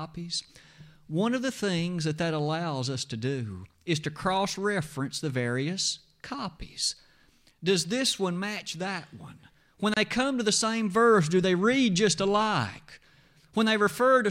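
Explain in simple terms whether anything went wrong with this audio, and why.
At 9.94 to 9.97 s the speech briefly stops for about 29 ms, a gap at a join of encoded pieces. Separately compressed sections were stuck together, leaving padding silence between them. Unlike a dropout, nothing is missing: the speech resumes exactly where it stopped.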